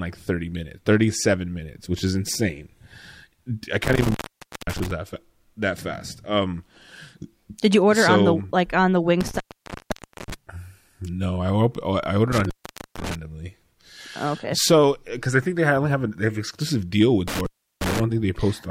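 A loose connection in the signal path, an intermittent contact, opens four times: 3.84–4.91 s (open about 0.53 s), 9.21–10.34 s after "the like on the" (0.91 s), 12.32–13.15 s (0.48 s), and 17.28–18.00 s after "they have exclusive deal" (0.35 s). Each time the speech drops out to faint hiss, with crackle as the contact breaks and remakes.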